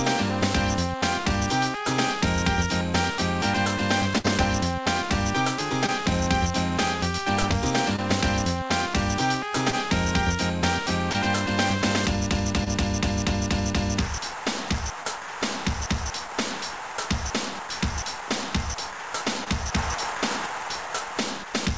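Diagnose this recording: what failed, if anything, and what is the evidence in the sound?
The network dropped a burst of packets at 4.18 to 4.26 s. About 60 ms of audio never arrived. The receiver extended the last sound and faded it over roughly 60 ms. That is a held buzz or fading hiss. Playback then resumes later, with that section gone.

Short concealed packet loss also occurs in the network stage. It happens at 5.86, 7.96, 9.70, 11.13, 12.64 and 19.44 s. Each time, about 20 ms was lost. The decoder patched it with continued sound and blended back. It is heard as a brief smear or wobble. The audio also stops at 8 kHz, which fits a 64 kbps G.722 call codec.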